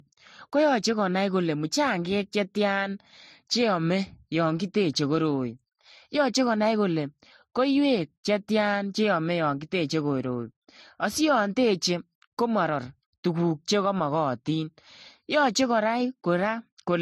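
Speech throughout carries a layered, smeared quality: artefacts from different codecs are heard together, and the top end stops flat, with nothing above 13.9 kHz. On a spectrogram this shows as a hard ceiling at that frequency and patchy, holed high bands, while the waveform looks ordinary. The likely cause is transcoding between lossy codecs, each pass keeping the lowest cut-off and adding its own artefacts, which points to low-bitrate MP3 and Vorbis stages ending in AAC-LC.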